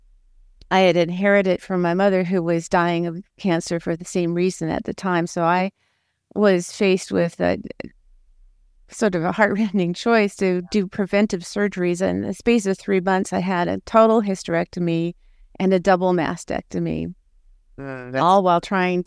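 No technical faults detected.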